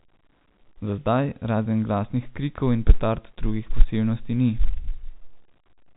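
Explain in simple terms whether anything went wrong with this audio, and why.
Nothing went wrong here: the speech has simply passed through ordinary G.711 telephone coding, which keeps only the sound below about 3.8 kHz and leaves at most a faint trace of its own, just as a normal landline call would.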